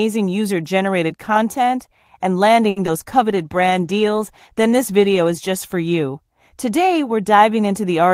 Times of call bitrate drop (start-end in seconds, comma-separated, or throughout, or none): 3.31-6.25